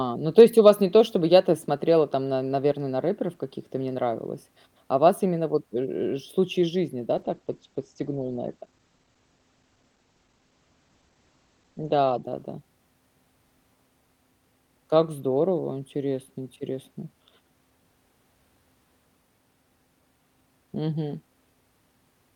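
At 7.17 s, just after "случай из жизни да", the call bitrate drops: the link's bandwidth estimate fell and the encoder was pushed to spend far fewer bits, which fits a fall from 48 kbps to about 14 kbps. The speech is coded more coarsely and its top end is cut from 20 kHz to 8 kHz, so it turns muffled and grainy. It stays at its worst for about 4.8 s and recovers by 13.25 s.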